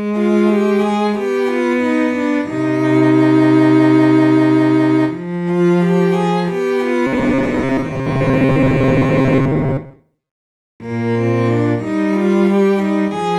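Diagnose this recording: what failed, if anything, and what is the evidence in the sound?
Robotic sound from repeated short buffers, 7.07 to 10.68 s: the audio turns into a rigid, metallic buzz at 134 Hz. The likely cause is a starved driver buffer replaying its last 7.5 ms fragment, so roughly half the sound is repeats rather than fresh audio.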